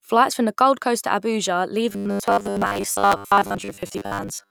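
From 1.90 s to 4.51 s the speech turns into robotic sound from repeated short buffers. A fixed buzz near 100 Hz appears. That fits 10 ms segments looping. Most of the audio is repeats. Audio was likely arriving too seldom.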